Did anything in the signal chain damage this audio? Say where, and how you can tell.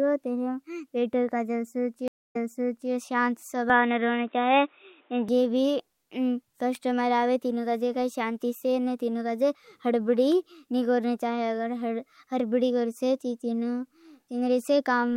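Yes. At the network stage, the stream reconnect broke the connection at 2.08 s and restarted the decoder mid-stream. The result is a silence of about 0.2 s, after which the audio resumes roughly 0.63 s earlier than where it stopped, so about 0.63 s of speech is heard twice.

At the capture stage, the input was likely switched to a poorer device from 3.70 s to 5.29 s. The sound abruptly turns dull, with nothing above 3.8 kHz, a level shift of around 5 dB and a new noise floor roughly 40 dB down. There is no gap at the switch.

In the analogue wiring, an electrical switching spike shows as two sharp snaps laid over the sound at 6.75 s and 10.32 s, each lasting only a millisecond or two. A nearby switch or discharge arcing into the audio line is the likely cause.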